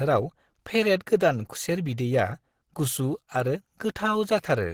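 Throughout, likely Opus compression running in its hybrid speech mode at about 16 kbps leaves the speech plainly hoarse and rough, though it still reaches 20.5 kHz.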